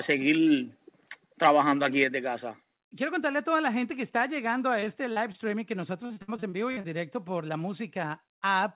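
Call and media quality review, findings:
Microphone volume stepped down, 1.02 s: speech and background drop together by about 2 dB in one abrupt step. Microphone volume stepped down, 2.04 s: a second step of about 4 dB. Likely the call software's automatic gain control cutting device input volume in discrete steps after a hot input.

Microphone overload, 1.44–1.51 s: the loudest syllable sounds harsh and crackly, with flattened peaks. The input runs about 4 dB past converter full scale, and a few percent of samples are clipped. Likely capture input volume set too high.

Repeated packet loss (robotic sound), 4.80–5.36 s, after "que está llegando a": choppy, four gaps (longest 38 ms), about 100 ms patched. The jitter buffer extends the last decoded sound into each hole.

Repeated packet loss (robotic sound), 6.06–6.86 s, before "directo por la": eight gaps (longest 59 ms), about 260 ms concealed, nearly a third of the span. 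A larger share is concealed here, over a G.711 mu-law path with nothing above 4 kHz.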